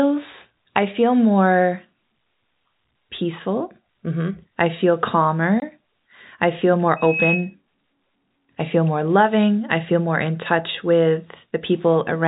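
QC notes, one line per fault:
5.60–5.62 s, packet loss filled with silence: a 20 ms hole cuts into the speech. The gap matches one lost packet. The receiver played silence in its place. The sound stops and restarts abruptly, with hard edges against the band-limited G.711 telephone audio.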